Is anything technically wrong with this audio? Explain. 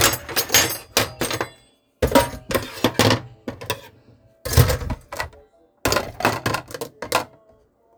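No, nothing technically wrong can be heard here.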